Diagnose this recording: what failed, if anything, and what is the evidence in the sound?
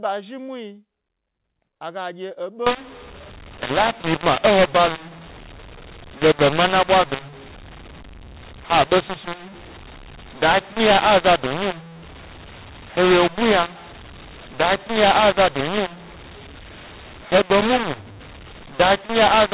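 From 2.67 s to the end, the speech turns harsh and gritty and every pause fills with hiss, the signature of mu-law and A-law mixed up at the codec stage. The G.711 bytes appear to be A-law coded but expanded with the mu-law curve, so levels are scrambled and near-silent samples land well above zero. On a waveform the gaps thicken into a solid noise floor. On a spectrogram, broadband grit fills everything up to the 4 kHz telephone ceiling.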